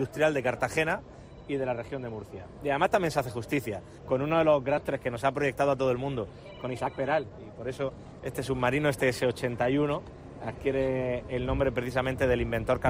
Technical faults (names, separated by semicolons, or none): skip ahead; jitter buffer speed-up